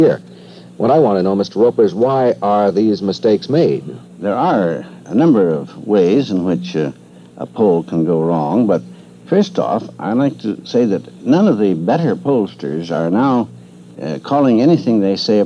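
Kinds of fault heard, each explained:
Nothing stood out on listening.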